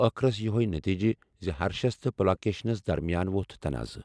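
Nothing goes wrong anywhere in this bit of speech, so there's no fault to point to at any moment.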